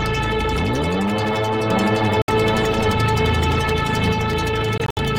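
From 1.70 s to 4.12 s a doubled audio track runs under the sound: a second copy at roughly the same level trails by about 0.7 s. It's full-band and dry, with no decay or room tone, and it cuts in and out abruptly at those edges. That's most likely a second, slower capture path or an edit holding two out-of-step copies, so everything gets restated a beat later like a hard, flat echo.

At 2.22 s there's a Bluetooth dropout, a 64 ms hole from 2.22 to 2.30 s, and the sound resumes as if it had kept playing underneath. Another one hits between 4.78 s and 4.99 s, where about 107 ms goes missing in more than one gap spread over roughly 0.19 s, the longest gap 64 ms. These are likely packets not reaching the headphones in time, so the sound briefly drops to silence.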